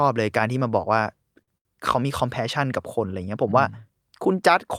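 At 1.42 s and again at 1.58 s, a short stall from a late packet holds the speech for about 52 ms, then 74 ms, with a faint buzz or dip. Unlike a dropout, nothing is skipped: playback resumes where it paused, just slightly later.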